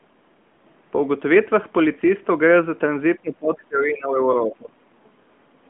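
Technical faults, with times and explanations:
3.18–4.77 s, speech suppressed in double talk: the speech dips and breaks up for about a second in all, dropping roughly 25 dB at worst. The likely cause is an echo canceller ducking it during far-end talk. The waveform shows notched gaps, and the spectrogram shows faint, broken bands.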